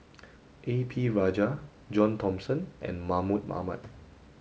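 No technical fault can be heard in this speech recording, which has passed through G.722 wideband telephone coding at what sounds like 64 kbit/s, with any trace of the codec faint at most.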